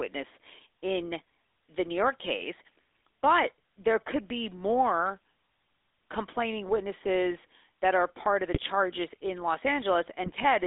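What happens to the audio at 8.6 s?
GSM bit errors hit from 8.54 to 8.6 s, just after "are part of the". Flipped bits corrupt the decoder's filter, pitch or gain values. The spectrum bends or the level jumps. The sound breaks into a short garbled burst.

Under it, the GSM full-rate codec runs throughout. It rebuilds the sound from a vocal-tract model and a sparse pulse excitation, in a 300 Hz to 3.6 kHz band. Its buzzy, gravelly roughness is plainly audible.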